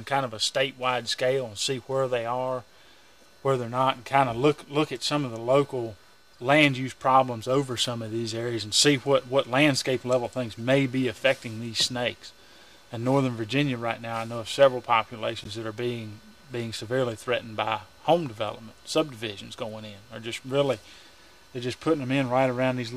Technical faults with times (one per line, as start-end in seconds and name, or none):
6.33-6.40 corrupt frame decoded
10.57 corrupt frame decoded
15.44-15.46 corrupt frame decoded